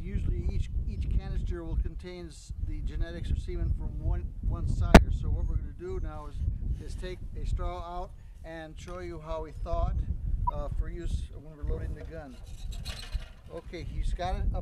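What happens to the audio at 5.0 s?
A corrupt frame decoded just before 5.0 s, from 4.94 to 4.97 s: damaged compressed frames were played as if valid, scattering energy to wrong frequencies. It sounds like a sharp chirp or noise burst peaking near -5 dBFS, a thin vertical smear on a spectrogram and a spike on the waveform.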